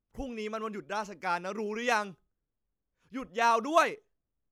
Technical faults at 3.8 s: none

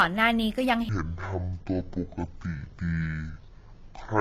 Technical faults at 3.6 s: transcoding between lossy codecs; section at the wrong speed

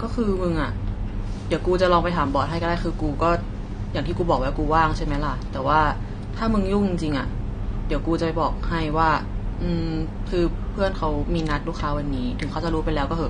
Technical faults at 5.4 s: AAC compression

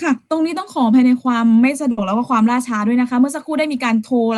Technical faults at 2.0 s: burst of packet loss

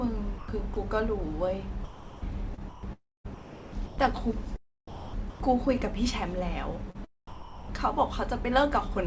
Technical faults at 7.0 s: sound chopped by the voice detector

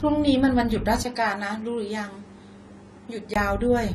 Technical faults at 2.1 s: AAC compression; input switched to a poorer device

